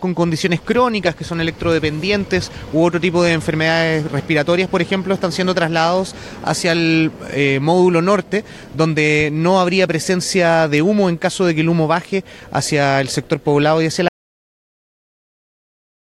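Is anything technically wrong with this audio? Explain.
Yes. At 14.08 s there is an audio dropout to silence lasting to the end, about 2 s. The sound cuts off mid-flow into silence with no room tone, unlike a fade or gate, likely because the input was lost while recording continued.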